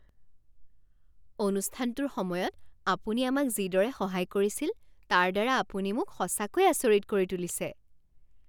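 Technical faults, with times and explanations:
No technical faults can be heard anywhere in this speech recording. There is nothing to list with a time or an explanation.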